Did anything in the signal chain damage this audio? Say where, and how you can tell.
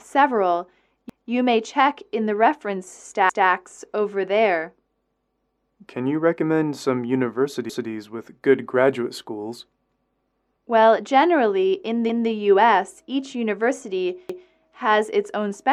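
Yes. Overlapping chunks appear at 1.10, 3.30, 5.50, 7.69, 9.90, 12.10 and 14.29 s, each time as a brief stutter in which about 200 ms of sound plays twice. The stage is buffered chunk processing: the audio was handled in blocks of about 2 s, and each new block began 200 ms before the previous one ended. Each join therefore replays that tail, so the stutters recur at a steady spacing of about 2.2 s.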